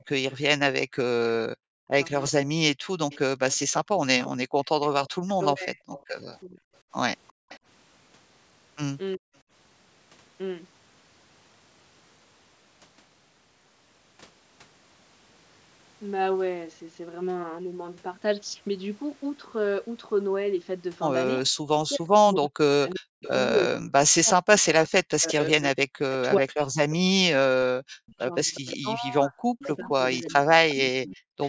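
Speech over a call, band-limited to 8 kHz by the normal call microphone processing, with a few echo canceller problems. There's an echo leak from 0.0 to 7.59 s and again from 22.9 to 31.09 s: a copy of the far side trailing by 358 ms, roughly 20 dB down early and about 15 dB down later, likely loudspeaker pickup the canceller didn't fully remove. Between 0.02 and 7.49 s the background is gated by the echo canceller, with the room sound ducking by about 37 dB for a few hundred milliseconds in total. The talker's speech is suppressed in double talk at 1.44–1.92 s, 5.07–9.29 s and 21.48–31.42 s, dropping by around 40 dB in patches. That adds up to several seconds in the last stretch and is most likely the canceller clamping down while both sides talk.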